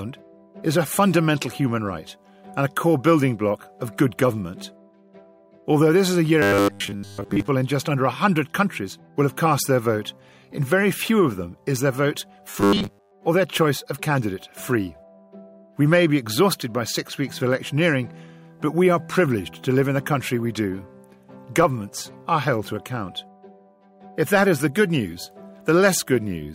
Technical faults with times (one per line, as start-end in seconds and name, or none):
6.42-7.48 robotic sound from repeated short buffers
12.50-13.12 robotic sound from repeated short buffers